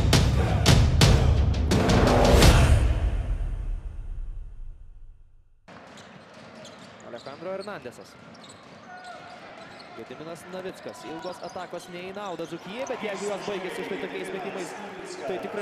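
From 8.99 s to 15.50 s the audio shows periodic USB or driver dropouts. Every 0.1 s a brief gap of roughly 2 ms is replaced by silence as the bus or driver stalls. This yields a steady ten-per-second ticking heard against the signal, some seventy in all.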